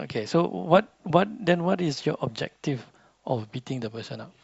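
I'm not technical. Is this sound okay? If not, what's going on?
Yes, no technical fault can be heard anywhere in this speech clip.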